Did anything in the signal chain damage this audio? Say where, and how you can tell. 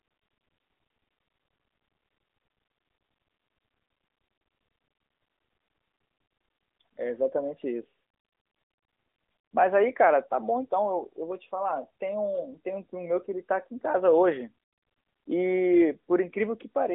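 No, nothing in this signal chain damaged the speech. It has passed through an AMR narrowband mobile codec, which limits it to a telephone band of roughly 250 Hz to 3.6 kHz and leaves the light coding texture expected at a high mode such as 12.2 kbps.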